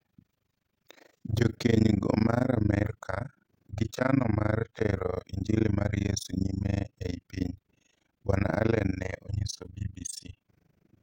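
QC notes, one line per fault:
Throughout: overlap-add ripple. The speech was split into windowed frames and rejoined with overlaps that do not sum to a steady gain. Level dips by about 60 dB once per frame, roughly 30 times a second. This gives a harsh, robotic flutter.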